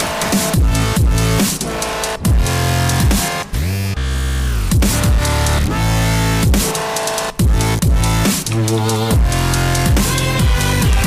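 There's hard clipping all the way through: the level was pushed roughly 5 dB past what the stage could pass, so around a tenth of the samples get sliced flat at the ceiling. That gives every loud moment a harsh, fizzy edge from those squared-off peaks.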